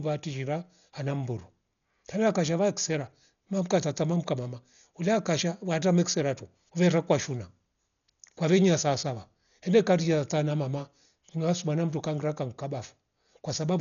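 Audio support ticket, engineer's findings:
Dolby Digital compression, throughout, 0 s to end, likely cause. Speech dull and band-limited, nothing above 6.9 kHz. Heavy codec damage: rough, fluttering noise hugging voiced tones. Mechanism: starved encoder narrows bandwidth, leaves many frequency lines without mantissa bits, and the decoder fills them with dither noise, giving the grainy texture around harmonics. Damage level fits a low-rate AC-3 stream, around 48 kbps.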